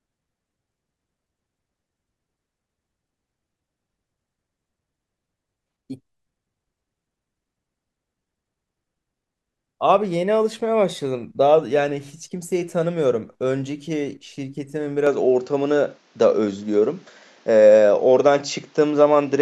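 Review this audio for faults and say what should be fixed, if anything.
At 15.07 s the speech abruptly changes character and stays that way to the end. Nothing is heard above 7.6 kHz after that point. The level shifts by about 5 dB. A faint new background noise appears, roughly 40 dB below the speech. There is no gap at the change. This points to an input switched to a poorer device, likely a fallback microphone or headset profile, with narrower bandwidth and its own noise. To prevent it, lock the recording input so the system cannot change devices mid-session.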